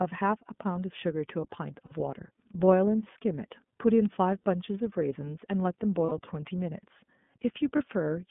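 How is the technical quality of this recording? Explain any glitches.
The technical quality is limited. The whole clip is narrowband coded speech, and four short dropouts are concealed by repeated sound.

Throughout, the audio carries plainly audible iLBC codec damage. The band is confined to roughly 150 Hz to 3.5 kHz, so speech sounds thin and muffled, with a slightly rough, synthetic edge. iLBC codes each frame's excitation independently, which fits 30 ms frames and the 13.33 kbps mode. On a spectrogram, energy stops sharply at the 3.5 kHz ceiling and nothing appears below 150 Hz.

Lost iLBC frames occur at 1.86 to 1.92 s, 4.40 to 4.43 s, 6.06 to 6.12 s and 7.77 to 7.80 s. The first and third gaps last about 60 ms, which fits two missing frames. The other two last 30 ms, which fits one. The decoder fills each gap by repeating the last pitch cycle blended with noise, so you hear a brief held, buzzy vowel. 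Because frames decode independently, speech recovers immediately afterwards. A spectrogram shows flat, smeared harmonic stripes there, and the waveform shows near-identical repeated cycles.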